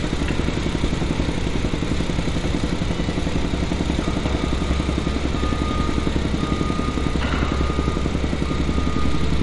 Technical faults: MP3 compression

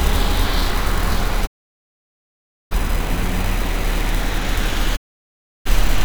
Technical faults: digital broadcast dropout

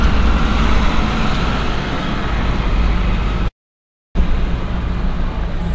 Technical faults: long network dropout; jitter buffer speed-up

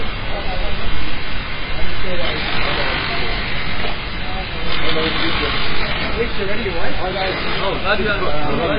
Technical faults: MP3 compression

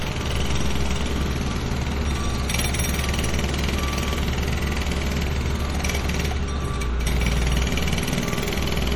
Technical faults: MP3 compression

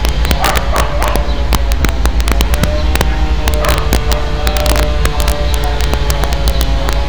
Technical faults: integer overflow

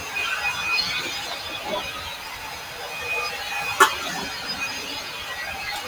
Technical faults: sound cut by the noise suppressor

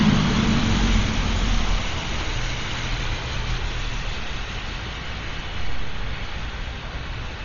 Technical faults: Dolby Digital compression

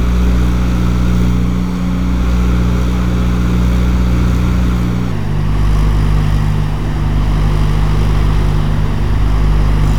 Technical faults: section at the wrong speed

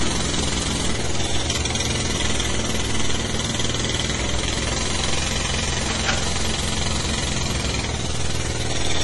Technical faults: MP3 compression

